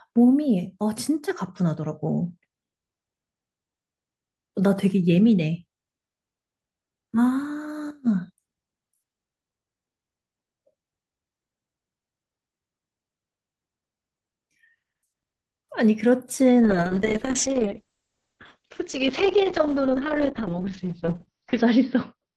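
Speech carried over a WebRTC call path with Opus coding has a call bitrate drop from 16.64 s to the end. The audio band narrows from 12 kHz to 6 kHz and turns coarse and muffled, staying at its worst for about 5.0 s. This sound fits the encoder falling from roughly 32 kbps to about 7 kbps after the bandwidth estimate collapsed.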